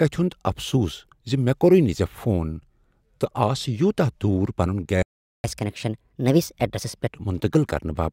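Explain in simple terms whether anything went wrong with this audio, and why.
A playback stall hits at 5.02 s: the speech cuts to silence for about 0.41 s, likely because the player ran out of data or was briefly held up. Catch-up at higher speed follows from 5.44 s to 7.10 s: the speech runs 1.25 times faster and roughly four semitones higher while the player makes up the lost time, then returns to normal.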